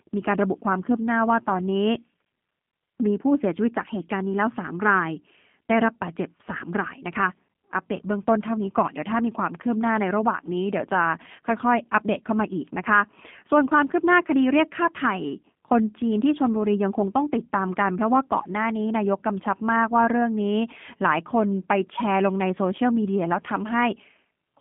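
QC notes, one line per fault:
Throughout, G.729 codec: the speech sounds rough and faintly synthetic, and nothing below about 150 Hz or above 3.5 kHz survives. The coder rebuilds each 10 ms frame from a vocal tract filter, a pitch predictor and a few pulses rather than the waveform itself, so fine detail becomes coarse and mechanical. The plainly audible damage fits an 8 kbit/s G.729A stream on a narrowband line.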